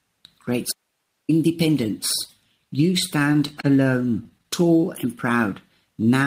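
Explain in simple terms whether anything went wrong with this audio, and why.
Two things go wrong here. First, an audio dropout to a faint residue: from 0.72 to 1.29 s the sound suddenly cuts out, leaving only a very faint hiss for about 0.57 s. It's likely the signal was lost while the line itself stayed live.

Second, repeated stalls, a stutter, between 3.19 and 4.69 s. The sound arrived late 14 times, and each time the player stretched the last bit of audio for up to 25 ms while it waited. Nothing goes missing, but the sound drags and catches.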